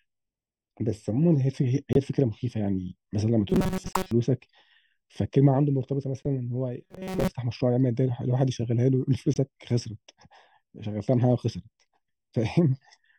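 Right through the clip there's channel delay (comb filtering): one side runs a fraction of a millisecond late, so the mono sum sounds hollow, with evenly spaced notches starting around 1.5 kHz.

At 1.93 to 1.97 s a corrupt frame gets muted. The decoder rejected damaged data, leaving an abrupt silent hole that points to about three frames.

From 3.50 to 4.11 s you get robotic sound, likely from repeated short buffers. A rigid 188 Hz buzz replaces most of the real audio, which fits a loop of roughly 5 ms. Inside that stretch, a single frame is muted at 3.93 to 3.96 s.

Another one-frame muted gap comes at 6.23 to 6.26 s. The same 188 Hz robotic buzz returns from 6.84 to 7.30 s. A final corrupt stretch, about three frames long, drops out at 9.34 to 9.37 s.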